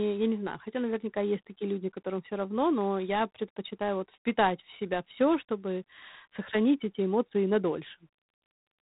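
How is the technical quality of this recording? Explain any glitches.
The technical quality is poor. The whole recording has passed through G.726 ADPCM coding, which leaves plainly audible damage.

Throughout the speech, each sample is coded as a few bits of difference from an adaptive prediction. That coarseness, which fits 24 kbit/s, adds a harsh, rasping hiss that swells and fades with the speech level. A spectrogram shows a sharp ceiling at 3.9 kHz, with grainy noise filling the band below.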